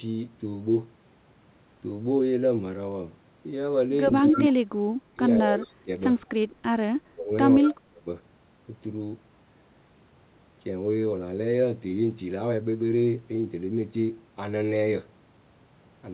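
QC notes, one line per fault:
4.22 to 8.07 s, speech suppressed in double talk: the speech dips and breaks up in five stretches, at 4.22–4.51, 5.01–5.22, 5.39–5.90, 6.99–7.33 and 7.59–8.07 s. The first dips only about 10 dB, and the later ones cut much deeper, about 25 to 30 dB. This is likely an echo canceller turning the talker down while the far side also talked.
4.26 to 7.70 s, echo leak: a delayed copy of the speech trails it by 185 ms, at 4.26–4.53, 6.22–6.26 and 7.63–7.70 s. It is loudest near 4.3 s, only about 5 dB under the speech, and barely audible at 6.2 s. This is likely loudspeaker pickup that the echo canceller failed to remove.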